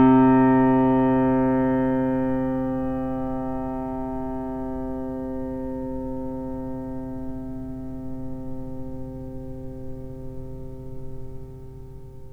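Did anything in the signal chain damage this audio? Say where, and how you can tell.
No, nothing in the signal chain audibly damaged this audio: the level, timing and frequency content hold steady throughout with no sign of trouble at any stage.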